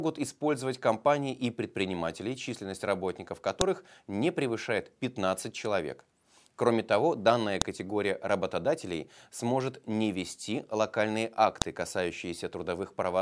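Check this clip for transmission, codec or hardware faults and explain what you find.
The speech has one recurring fault, a file header played as audio. Sharp clicks land at 3.61 s (after "и предприниматели численность работников"), 7.62 s (after "того данная") and 11.62 s (after "сможет не вести локальные"). They arrive every 4 s. Separate pieces were joined with their headers left in, and those header bytes play as a loud snap.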